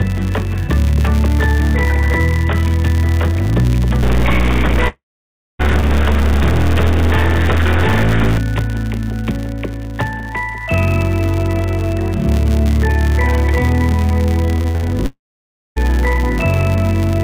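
All the way through there's a 100 Hz buzz riding on the audio and rising and falling with its level. That's the filter restarted on every block: each block starts from a cleared state, so every boundary kicks off a little transient, which fits blocks arriving a hundred times a second.

From 4.03 to 8.38 s the sound turns noisy, with noise creeping into the quieter moments. The likely cause is a stuck bit, one data bit jammed at a fixed value, throwing roughly half the samples off by that bit's weight.

Inside that stretch, at 4.88 s, the audio breaks off. A fading buzzy continuation of the last sound carries on briefly, then about 0.59 s of near silence follows before the sound returns at 5.61 s, with around 0.72 s simply gone. That points to a long network dropout, likely.

The same thing happens again from 15.06 to 15.78 s: a short fading fill, roughly 0.58 s of silence, then the sound resumes with about 0.7 s missing. 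The receiver likely papered over the gap as best it could, but the lost audio never came back.

Separately, nothing above 4 kHz comes through, which fits a call path using G.711 A-law at 64 kbps.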